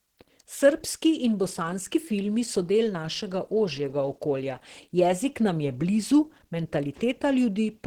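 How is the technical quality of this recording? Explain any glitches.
The technical quality is noticeably compromised by codec damage that runs through the whole recording.

Opus compression, throughout: the speech sounds muffled and hoarse, with grainy, noise-filled upper frequencies. This is likely Opus encoding in its hybrid speech mode, which codes the lower band parametrically and fills the upper bands coarsely, consistent with a low bitrate around 16 kbps.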